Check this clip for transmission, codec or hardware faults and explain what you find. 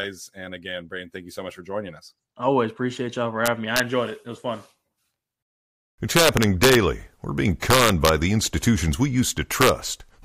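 The speech carries integer overflow in four places. The first is from 3.46 to 3.80 s, between "appreciate y'all for" and "enjoyed it". The next are at 6.17 to 6.75 s and at 7.70 to 8.09 s, just before "the institutions we". The last is at 9.61 to 9.69 s, right after that phrase. Loud peaks ran past the integer ceiling by about 2, 4, 5 and 2 dB. Instead of being held at full scale, they wrapped to the opposite sign. Each overshoot is a harsh crack, far sharper than clipping.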